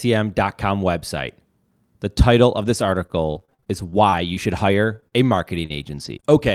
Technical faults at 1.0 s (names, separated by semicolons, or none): none